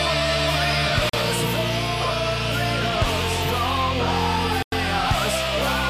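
At 1.09 s the audio drops to silence for about 39 ms, and at 4.63 s for about 97 ms, each time before picking up again. These are a likely Bluetooth stall: interference delayed packets, the headphone buffer ran empty, and playback waited for the retransmissions.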